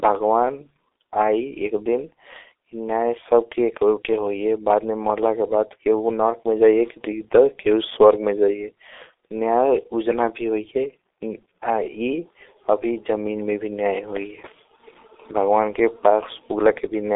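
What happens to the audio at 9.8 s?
At 9.8 s the speech carries G.723.1 codec damage, present across the whole clip. The low-rate vocoder, consistent with roughly 6.3 kbit/s, confines audio to about 300 Hz to 3.7 kHz and updates its voice model slowly, so speech sounds muffled and hoarse with smeared consonants.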